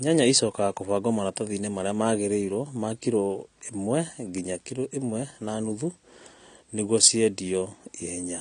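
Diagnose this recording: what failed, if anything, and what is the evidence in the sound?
Throughout the speech the sound is dull and smeared, with a warbling, fizzy texture on sustained vowels and sibilants, and there is nothing above 9.6 kHz. This points to the codec stage, most likely AAC compression (AAC-LC). At a low bitrate, which here fits roughly 32 kbps, the encoder lowers its cut-off and quantises each frame's frequency lines coarsely. That leaves spectral holes and noisy, unstable bands where detail should be.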